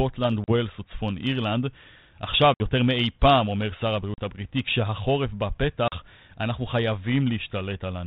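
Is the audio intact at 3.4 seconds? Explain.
Yes, the audio is intact at 3.4 seconds, with the speech carried through G.726 ADPCM at 32 kbit/s in the ordinary way for that telephone codec.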